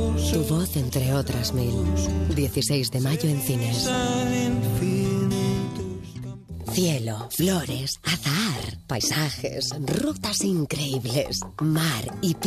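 At 7.39 s compressed frames are skipped: about two 23.2 ms frames vanish, so the audio jumps ahead roughly 50 ms, seen as a spectrogram discontinuity.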